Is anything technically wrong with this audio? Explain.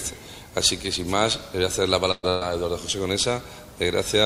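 Yes. Two bursts of packet loss occur back to back, at 2.11 to 2.26 s and 2.29 to 2.44 s. Each time, about 120 ms of audio never arrived. The receiver stretched and faded the last sound to cover the hole, so a brief held tone or hiss is heard. After the first gap the fill dies to about 20 ms of silence, and then the sound jumps ahead with that stretch lost.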